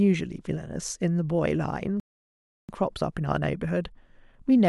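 At 2.00 s the player runs out of downloaded audio, a rebuffering stall: the speech drops to silence until 2.69 s, then resumes exactly where it stopped, adding 689 ms.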